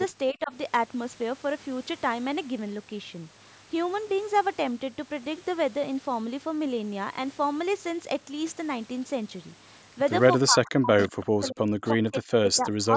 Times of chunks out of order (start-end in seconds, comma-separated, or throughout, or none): none